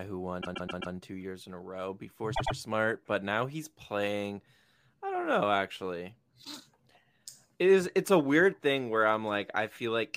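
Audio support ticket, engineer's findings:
Repeated frames, 0.41–0.93 s, just before "two years in a": stutter, a roughly 131 ms block played four extra times. Points to a run of about five compressed frames resent in transport or written twice by the encoder; adds about 0.52 s.

Repeated frames, 2.34–2.55 s, after "in a row before": a roughly 105 ms block repeats twice more, which fits about four frames duplicated. Adds about 0.21 s.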